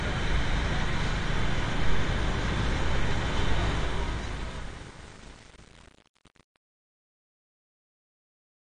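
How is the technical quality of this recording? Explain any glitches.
The technical quality is poor, with two problems: a dull, smeared tone throughout and a fade-out that turns gritty.

Throughout the clip, the audio sounds muffled, with a watery, fizzy texture, and nothing is heard above 9.6 kHz. This is likely AAC compression at a low bitrate, around 32 kbps. The encoder lowers its cut-off and thins out the spectrum to save data.

From 3.74 s to the end at 8.62 s, the fade-out turns gritty. This is truncation distortion on a fade. The gain stage keeps too few bits and adds no dither, consistent with 8-bit processing. As the level drops, the waveform collapses into coarse square steps. The fade itself starts at about 3.7 s.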